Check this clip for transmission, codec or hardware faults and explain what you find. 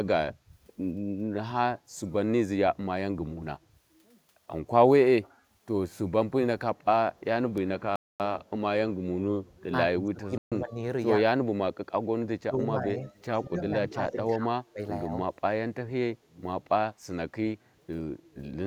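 There are three kinds of fault here, all bunched between roughly 8 and 15 seconds.

A Bluetooth stall hits at 7.96 to 8.20 s and again at 10.38 to 10.52 s. The sound drops to silence for 241 ms, then 137 ms, and picks back up. That's likely the headphone buffer running dry while interference held up packets.

Speech suppressed in double talk shows up at 9.89 to 10.80, 11.19 to 11.42, 12.42 to 12.63, 12.80 to 12.90, 13.44 to 14.81 and 15.07 to 15.28 s. The voice dips by up to about 30 dB, only slightly in the 12.80 and 15.07 spots. That's likely the echo canceller ducking everything while both sides talked at once.

An echo leak sits at 13.07 to 13.23 s. It's a faint copy of the voice, about 25 dB down and delayed 101 ms. That's likely a loudspeaker end whose canceller let some of the mic pickup slip back through.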